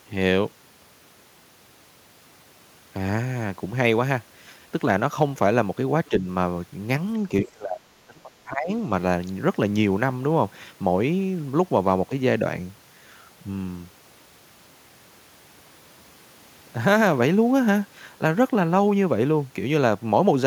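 At 6.09 to 6.26 s the speech dips by about 5 dB, then from 7.45 to 8.71 s it is pulled down much further, by about 30 dB, for roughly a second. This is likely speech suppressed in double talk, where an echo canceller mistakes the talker for loudspeaker echo. Unlike packet-loss dropouts, the level is turned down rather than abruptly blanked.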